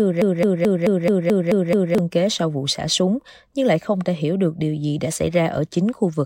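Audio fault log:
0.00–1.98 s broken-record loop: a 0.22 s fragment of speech repeats identically eight times back to back, already looping as the clip opens. Unlike echo, the repeats neither fade nor overlap. A stalled player or stream likely kept resending its last fragment, so the intended speech is lost.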